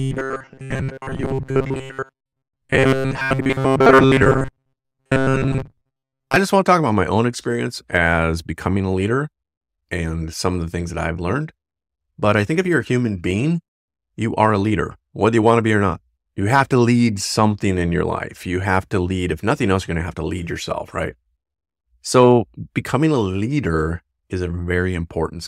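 Speech clip. From 0.01 to 6.36 s, just before "just want to talk", it has robotic sound from repeated short buffers: a rigid 133 Hz buzz. This is likely from short 7.5 ms buffers being repeated for most of that stretch.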